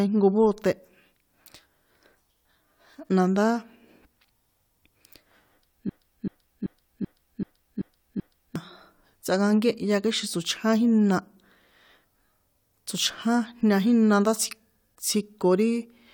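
From 5.89 to 8.56 s the speech falls into a broken-record loop: a 0.38 s fragment repeats exactly seven times, back to back, likely because playback stalled on its last buffer. The waveform and spectrogram show identical blocks tiling that span; the intended speech is lost.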